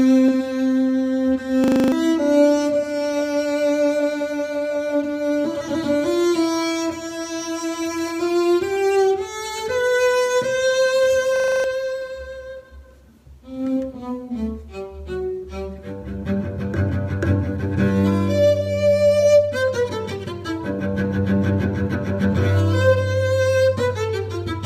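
At 1.64 s there's a system hang loop: the machine stalled while the audio hardware kept replaying the same 40 ms slice of its ring buffer, seven times through to 1.92 s. That repeat at 25 Hz comes across as a buzz, and roughly a third of a second of real audio is simply gone. The identical fault hits again from 11.36 to 11.64 s, same 40 ms loop, same seven passes.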